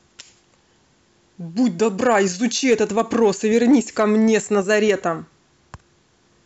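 Speech with hard clipping in two stretches. The first is brief, from 2.03 to 2.19 s, with the level pushed about 2 dB past what the signal path can carry. The second runs from 2.69 to 4.91 s at about 3 dB over. In both, the waveform peaks are sheared flat at the ceiling. Those squared tops add harmonics high in the spectrum. The result is crackle and a rough edge on the loudest syllables.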